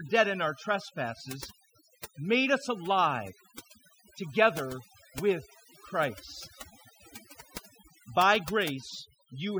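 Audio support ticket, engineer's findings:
Overdone noise removal, throughout. Background between phrases drops, speckled with brief twinkling tones. Probable component: noise reduction stage set too aggressive. Mechanism: individual frequency bands near the estimated noise level pulled far down or gated off frame by frame, taking quieter voice components with them. Isolated surviving bands flicker on and off, producing the specks.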